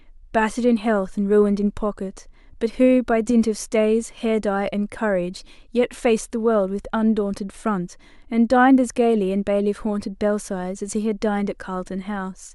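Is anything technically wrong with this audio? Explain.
No, nothing is technically wrong with this speech recording. Nothing in it points to a problem with how the audio was captured, processed or delivered.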